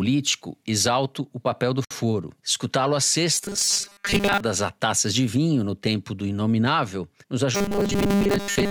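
At 1.85 s, right after "exalto o papel do", the speech drops out for about 59 ms and then resumes where it stopped. This is a gap at a join of encoded pieces. Two separately encoded segments were spliced without trimming the encoder's leading delay and the padded final frame, so that dead time stays in the stream. On a waveform it is a flat stretch with abrupt, slightly softened edges. A spectrogram shows a clean vertical band of silence across all frequencies.

From 3.35 to 4.40 s, ending just before "a taças de vinho", and again from 7.55 s after "tempo do inominável nos" through to the end, the voice becomes a rigid metallic buzz that still loosely tracks the syllables. This is robotic sound from repeated short buffers. Most of the real audio is skipped while the last fragment is replayed, likely because buffers arrived too rarely. The steady 200 Hz buzz points to 5 ms buffers. A spectrogram shows evenly spaced horizontal harmonic lines at multiples of 200 Hz in place of natural pitch movement. 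The waveform repeats visibly every 5 ms.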